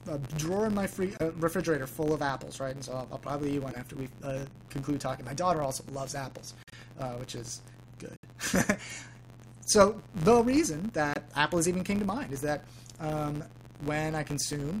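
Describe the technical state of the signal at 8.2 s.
At 8.2 s the audio drops into abrupt silence from 8.16 to 8.25 s, a hole of about 90 ms that fits three consecutive frame lengths. This is a corrupt frame muted: damaged compressed frames were rejected by the decoder and replaced with silence, leaving timing intact.

Around that gap, a steady buzz near 93.8 Hz rides on the sound and rises and falls with its level. This is a filter restarted on every block, which fits a 512-sample block: the filter loses its state at each boundary and starts from silence, so every block opens with a small transient.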